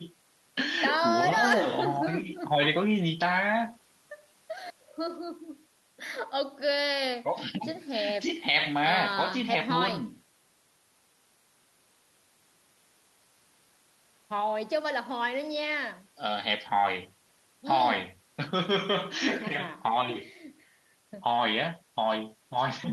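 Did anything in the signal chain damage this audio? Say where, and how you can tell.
No, nothing in this speech recording stood out on listening as damage from any stage of the signal chain.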